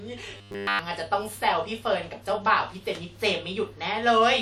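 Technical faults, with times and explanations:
0.37 to 0.79 s, robotic sound from repeated short buffers. The speech becomes a rigid, metallic buzz fixed at 100 Hz. New audio likely arrived too late, so almost everything heard is one 10 ms slice looped. That loop length sets the pitch.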